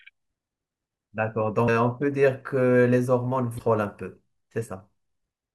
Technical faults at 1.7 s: damaged data in a compressed stream

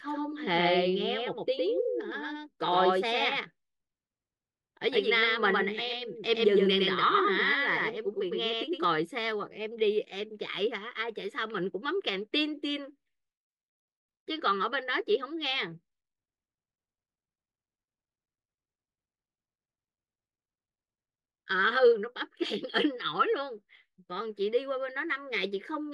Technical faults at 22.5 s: none

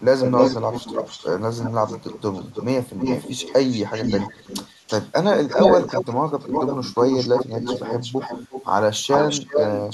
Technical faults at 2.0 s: echo leak

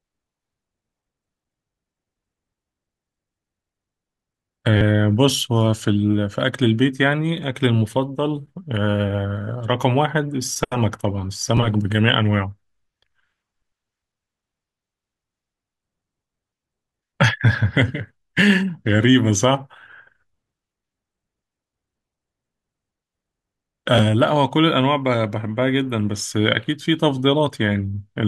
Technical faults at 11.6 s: repeated buffer

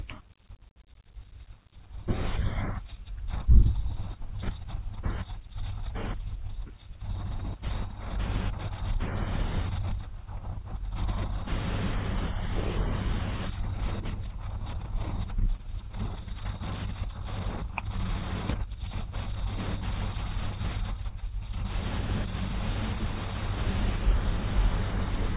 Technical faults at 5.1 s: none

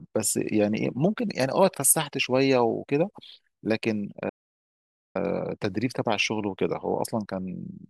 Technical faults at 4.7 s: playback stall

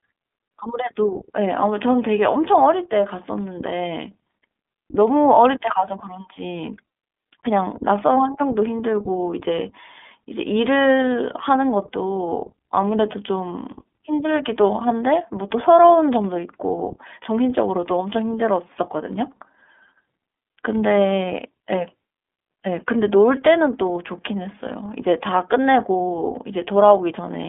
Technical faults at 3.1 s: iLBC codec

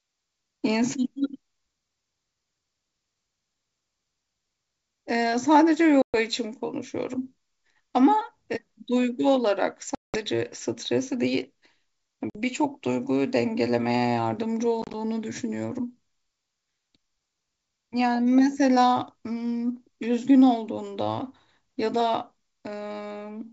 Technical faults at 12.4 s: packet loss on an ADPCM call

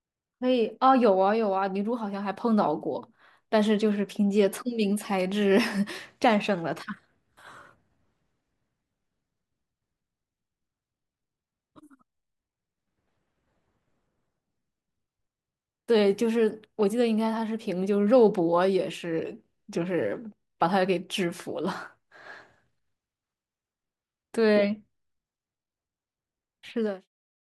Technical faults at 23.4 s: none

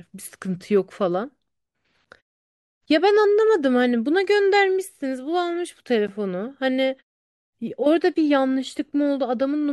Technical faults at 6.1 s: gap between stream segments

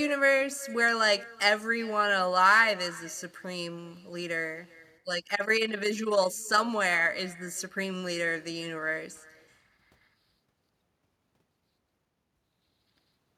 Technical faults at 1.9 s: echo with no canceller

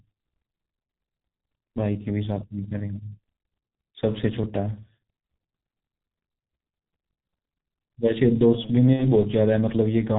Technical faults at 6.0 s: G.723.1 codec

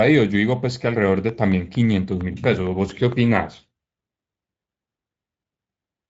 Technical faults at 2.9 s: train of clicks

